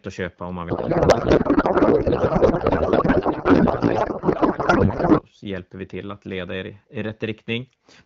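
A speech clip carried over what sounds like AMR wideband at around 12.65 kbit/s, where the talker comes through clear, but from 0.69 to 5.22 s there's a codec payload misread: octet-aligned frames are being unpacked as bandwidth-efficient, so the decoder pulls fields from the wrong bits and the speech turns into garbled, warbly noise that barely tracks it.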